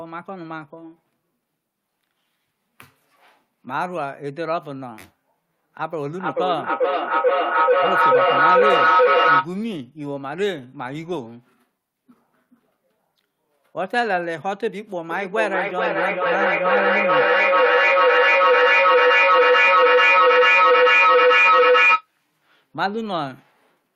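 Speech recording with feedback echo between two devices from 6.06 to 9.53 s and again from 15.11 to 22.09 s. The sound returns at a fixed interval of about 400 ms, and instead of fading, the repeats build to about 9 dB above the speech. This happens when a second device in the same room replays the call and the first microphone picks it up again, a path that neither device's echo canceller removes.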